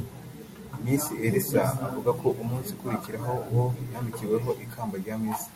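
No technical faults can be heard in this speech recording; the signal holds steady from beginning to end without any audible disturbance.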